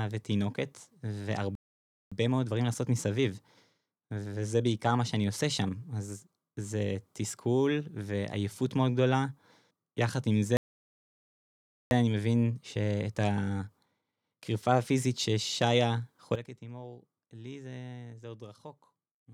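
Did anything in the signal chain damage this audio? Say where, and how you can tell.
Yes. Playback stalls at 1.55 to 2.12 s and 10.57 to 11.91 s: the speech cuts off mid-flow into dead silence, for about 0.56 s the first time and about 1.34 s the second, then resumes. The stage is the playback buffer. The cause is likely the player running dry or its output thread being held up, so nothing reached the converter until it recovered.

Time-compressed catch-up follows each stall, from 2.12 to 5.12 s and from 11.91 to 14.91 s. The speech runs about 1.1 times too fast, but its pitch stays normal. That combination shows the player working off its backlog by trimming small slices and cross-fading the joins, rather than resampling. This is playback-stage buffer management reacting to the stalls.

A sudden gain jump at 16.35 s drops the level by about 13 dB from one instant to the next, and it stays down to the end. 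Speech and background noise fall together, so the change lies in the digital path rather than the source or the microphone. The likely cause is a gain setting or bit shift applied without a ramp in the processing or playback stage.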